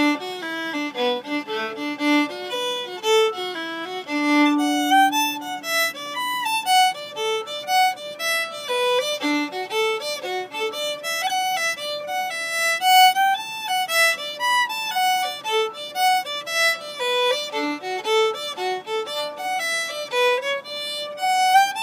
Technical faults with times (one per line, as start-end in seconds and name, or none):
17.29-21.83 crude rate conversion